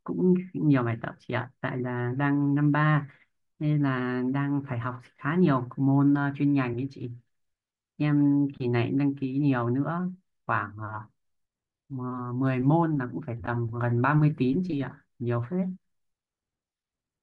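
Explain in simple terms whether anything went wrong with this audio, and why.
Something did go wrong, and it lasts the whole clip. The speech has a grainy, breathy edge from start to finish. The crisp high sounds seem hissy rather than clear. This is likely Bluetooth LC3 compression, the kind used by newer wireless earbuds and headsets. To save data, it throws away much of the fine high detail. It then fills the gap with soft noise. That fill is the graininess you hear.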